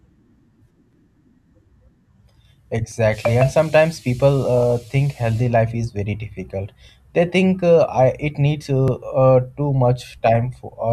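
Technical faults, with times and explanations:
0.93, 2.92, 4.90, 6.89 and 8.88 s: audio missing between chunks, likely from processing that drops around 10 ms at each 2-second chunk boundary, so the speech jumps abruptly at a steady rhythm.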